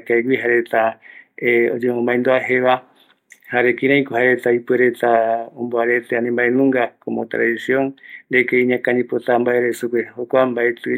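Nothing stood out as a technical fault on listening to the speech recording.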